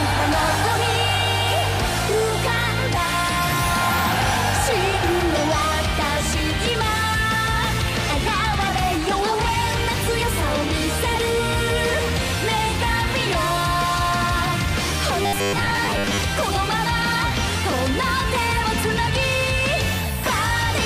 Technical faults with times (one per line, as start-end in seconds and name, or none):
15.22-16.22 robotic sound from repeated short buffers